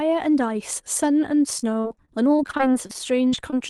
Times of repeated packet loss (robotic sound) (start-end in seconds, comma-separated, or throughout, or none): 1.59-3.54